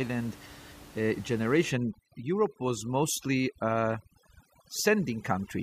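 Speech with room noise sitting about 21 dB under the voice, until overdone noise removal kicks in from 1.71 s to the end: background collapses to twinkly near-silence, and quieter parts of the voice get gated out along with the noise bands.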